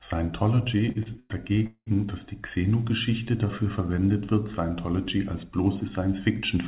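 From 0.78 to 1.88 s, just before "dass die", there's repeated stalling, a stutter: the jitter buffer kept running dry, so the sound drags through 11 held-over gaps, the longest 199 ms, with nothing actually lost.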